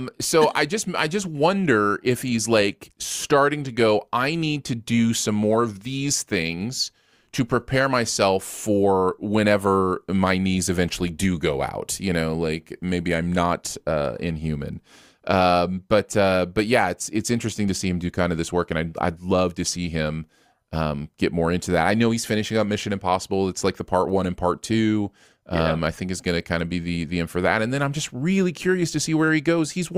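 A short stretch of recorded speech, and there's nothing technically wrong to point to anywhere in it.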